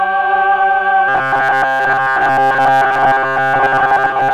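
From 1.09 s to the end, the audio takes on robotic sound from repeated short buffers. It becomes a rigid, metallic buzz at 133 Hz. That fits a chunk of about 7.5 ms being replayed. The likely cause is new audio arriving too seldom, so most of the sound is filled with repeats while the real signal is skipped.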